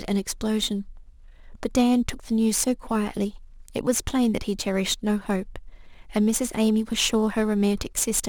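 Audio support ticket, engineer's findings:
Crude rate conversion across the whole speech clip. Probable component: resampler using nearest-sample pick, repeating samples on a fixed cycle with no anti-alias filtering. Pattern fits a 44.1 kHz to 48 kHz step. The resulting error sits only about 20 dB below the speech and produces inharmonic tones: a gritty buzz riding loud, bright syllables from start to end.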